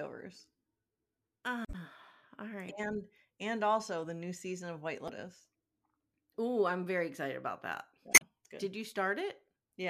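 A speech recording with damaged data in a compressed stream. Brief glitches break through at 1.64 to 1.75 s, 5.05 to 5.10 s and 8.11 to 8.22 s. Corrupted bytes make the decoder misread frames and hunt for the next header. The first glitch also adds about 20 ms.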